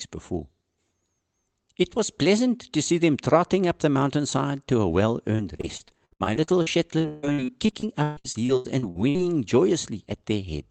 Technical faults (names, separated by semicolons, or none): repeated packet loss (robotic sound)